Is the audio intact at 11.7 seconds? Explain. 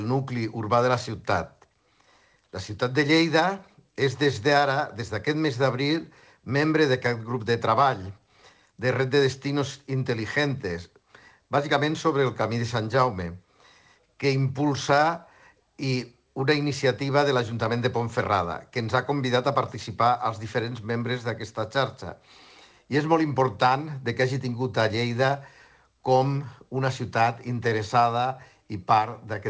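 Yes, the audio is intact at 11.7 seconds, with only the ordinary band limit of the G.722 call path, which leaves nothing above 8 kHz.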